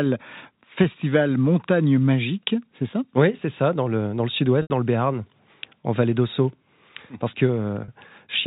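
At 4.62 s, packet loss with pitch repetition leaves an 80 ms gap, which fits four lost 20 ms packets. The receiver repeats the last pitch period, fading it toward silence before a quick cross-fade back. At 7.84 s, a 40 ms loss sounds like a briefly held, buzzy tone. The G.711 telephone band stays audible.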